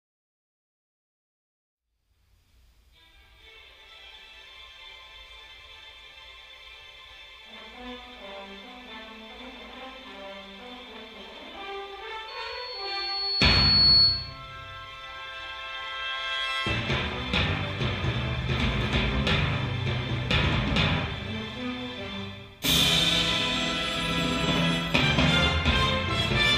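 At 12.28 s a loudspeaker feedback squeal begins. A single high tone near 4.4 kHz rises out of the sound. It swells over roughly one and a half seconds until it sits about 10 dB above everything else. Then it stops at 14.40 s. The cause is an acoustic loop. The microphone hears the loudspeaker it feeds. At 4.4 kHz the loop gain tops one, so that frequency feeds itself and grows.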